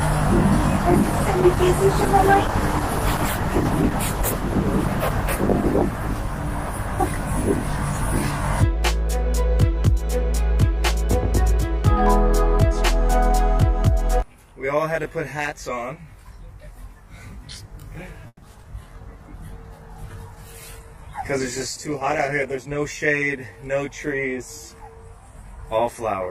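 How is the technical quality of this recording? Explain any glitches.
The recording has several network and channel faults, concentrated in two stretches, plus a constant comb-filter colouring.

Channel delay (comb filtering) runs throughout. One channel lags the other by roughly 20 ms, and summing them to mono cancels shared content at evenly spaced frequencies starting near 30 Hz. The result is a rough, slightly doubled sound.

A call bitrate drop occurs from 0.79 to 8.55 s and again from 18.78 to 22.65 s. The encoder fell from 64 kbps to 12 kbps, then to 13 kbps, holding its lowest rate for 4.4 s and 3.9 s. Coarser coding makes the sound rough and watery, with the highs trimmed.

A call audio freeze runs from 18.27 to 18.44 s. The receiver extends the last sound for about 150 ms, including 40 ms of near-silence, then resumes where it left off. Nothing is lost, but a gap is inserted, likely because delayed packets emptied the jitter buffer.

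Short concealed packet loss occurs at 18.62 to 18.65 s and 18.69 to 18.72 s. In each, 20 ms of audio never arrived in time, and the decoder filled 10 ms by continuing the preceding sound before blending back. Each is heard as a brief smear or wobble.

A jitter buffer speed-up occurs from 20.35 to 21.21 s at 104% and from 22.54 to 22.78 s at 114%. The receiver trimmed short pitch-period slices, roughly 40 ms in total each time, to reduce excess buffered delay. The sound runs faster at unchanged pitch, and the second feels hurried.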